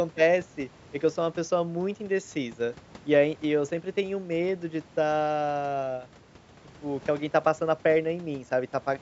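No technical faults occur in this speech recording.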